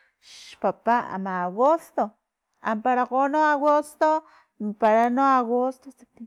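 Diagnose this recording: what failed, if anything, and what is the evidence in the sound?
Hard clipping is audible on the speech at 0.90–0.93 s and 1.65–1.67 s, as brief crackles on peaks. Longer stretches follow at 3.44–4.03 s and 4.84–4.96 s, where peaks crackle as well. The peaks exceed full scale by about 1 dB in the short events and about 2 dB in the longer ones. The failing stage is the converter or level handling ahead of it. Peaks are cut flat, adding high harmonics heard as crackle.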